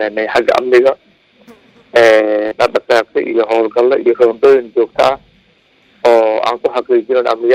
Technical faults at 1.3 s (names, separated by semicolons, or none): none